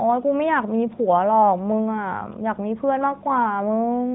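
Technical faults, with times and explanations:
No technical faults can be heard in this speech.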